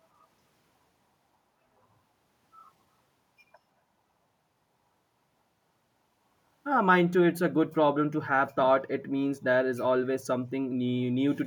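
At 7.34 to 7.39 s an echo leak appears: a very faint copy of the speech returning 163 ms late, likely because the far end's echo canceller let its loudspeaker pickup through. Unlike room reverberation, it is a discrete, separated repeat rather than a smooth decay.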